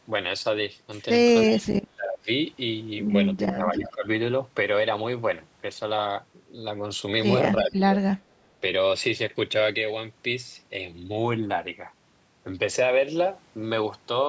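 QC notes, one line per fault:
1.49–1.59 s, 3.74–3.91 s, 7.57–7.65 s, echo leak: short repeats of the speech arrive about 330 ms after the original, roughly 20 dB, 10 dB and 15 dB below the speech respectively, so the second is the most audible. The near-constant delay points to a single return path. The likely cause is a far-end loudspeaker whose echo canceller did not fully remove what its microphone picked up, sending a delayed copy back.
1.50–2.29 s, 3.39–4.06 s, 7.63–7.97 s, speech suppressed in double talk: the talker's level dips sharply while the echo scraps overlap it, by roughly 35 dB in the first span, 15 dB in the second and 20 dB in the third, over about 0.7 s, 0.7 s and 0.3 s. The likely cause is the echo canceller being unable to separate near-end speech from the returning echo during overlap and attenuating both.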